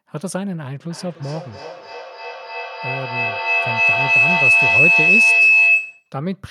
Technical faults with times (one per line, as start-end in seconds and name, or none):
0.90-6.22 feedback howl